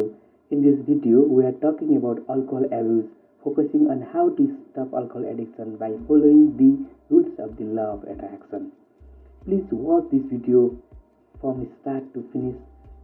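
Throughout the clip, channel delay causes comb filtering: one channel arrives roughly 3 ms late, and when the two are summed to mono, shared content cancels at evenly spaced frequencies starting near 150 Hz. The result is a fixed, hollow, phasey colouration across the whole sound.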